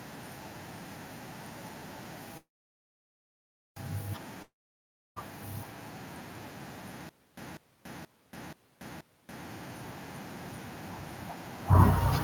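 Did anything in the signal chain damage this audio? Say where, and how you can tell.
Yes. At the network stage, packets were likely held up and the jitter buffer ran dry, causing a call audio freeze from 2.37 to 3.78 s. The last sound decays into 1.29 s of silence, then speech resumes exactly where it stopped, now 1.39 s late.

A long network dropout follows at the same stage, from 4.42 to 5.18 s, likely caused by a stretch of packets that never arrived. A brief fading fill gives way to 0.65 s of silence, and speech returns with about 0.74 s permanently missing.

At playback, the stream likely stalled and retried, producing a stutter with silent gaps from 7.09 to 9.45 s. The same 196 ms fragment repeats 5 times every 479 ms, separated by 283 ms of digital silence, and the speech belonging there is lost.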